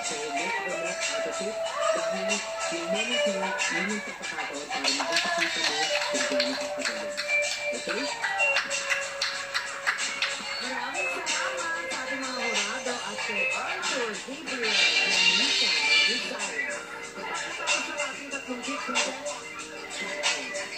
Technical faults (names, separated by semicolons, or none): loose connector crackle